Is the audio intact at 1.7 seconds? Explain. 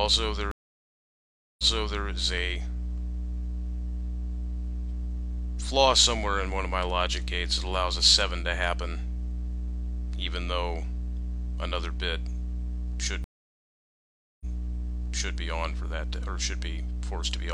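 No. A stream reconnect spans 0.51 to 2.05 s. The connection dropped, leaving about 1.07 s of silence. The audio then resumes 0.46 s earlier, repeating a short stretch.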